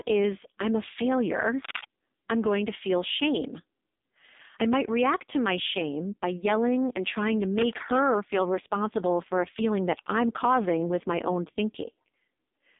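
Throughout the speech, the AMR narrowband mobile codec confines everything to roughly 200 Hz to 3.7 kHz, with nothing above 3.8 kHz. The heavy buzzy, synthetic coloration suggests one of AMR-NB's lowest modes, near 5 kbps, where too few pulses drive the vocal-tract model.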